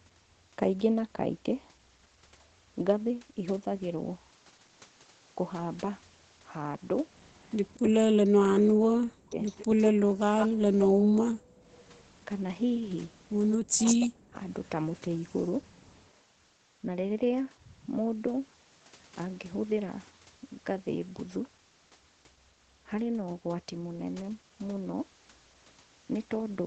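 A speech recording from a call, band-limited to 8 kHz, which fits an Opus codec at around 20 kbps, with three kinds of echo-canceller fault. Speech suppressed in double talk occurs at 8.45–9.39 s, 9.99–11.15 s and 13.59–14.4 s. The talker's level collapses by up to roughly 40 dB for about a second at a time, slightly less in the last instance. The likely cause is the canceller mistaking near-end speech for loudspeaker echo while the far side is also talking, and attenuating everything. An echo leak is audible at 9.45–10.48 s and 13.5–13.95 s as a second copy of the speech trailing the original by 155 ms. It sits about 10 dB below the direct speech in the first instance and only about 5 dB below in the second, where it is much more prominent. This is likely residual loudspeaker pickup that the canceller failed to subtract and that was sent back down the line. The two faults overlap, so the talker is being pushed down while the stray echo passes through. 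Background gated by the echo canceller shows at 11.43–11.67 s. The room tone drops by about 37 dB for roughly 0.2 s and then returns. The canceller's suppressor clamped the microphone hard while the loudspeaker was active and then let go.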